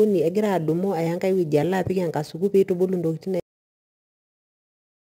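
A speech clip with two problems. The first is sample clock jitter, there from start to finish: the converter's clock wobbles, with timing error on the order of 10 microseconds rms, so each sample is taken a touch early or late. Steep parts of the waveform turn that into amplitude error, roughly 30 dB under the signal, which you hear as a gritty hiss riding on louder and brighter sounds and disappearing in the gaps. The second is a cut-off end at 3.40 s. The audio stops dead mid-sound and drops straight to digital silence with no decay at all, staying silent to the end of the file. That points to the final buffers never being written out or played, so the tail of the recording simply isn't there.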